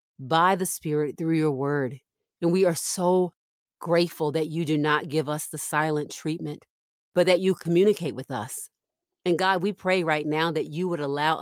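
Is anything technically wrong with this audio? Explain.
No, nothing technically wrong stood out on listening to this speech recording.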